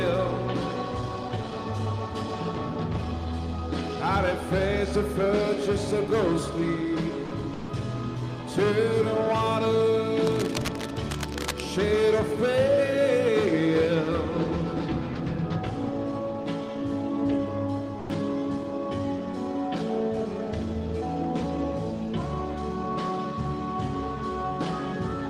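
Brief gaps where the sound gives way to flat comfort noise at 7.25 to 7.31 s, 7.53 to 7.69 s, 15.13 to 15.15 s and 17.99 to 18.09 s are likely sound dropped by the voice detector of an Opus-style discontinuous transmission. Unlike packet loss, the gaps are filled with steady noise rather than clicks or repeated fragments. From 10.27 to 11.60 s, dense, uneven rustling sits fairly loud over the sound, likely cable scratch noise from a worn contact being moved. It is irregular and gritty rather than a steady hiss or single clicks.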